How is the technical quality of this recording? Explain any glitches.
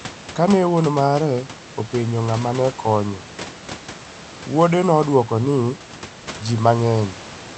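No glitches turn up anywhere in the recording: the steady room background sits about 16 dB below the speech, and the call codec's band limit at around 8 kHz takes off the top of the spectrum as expected for this kind of link.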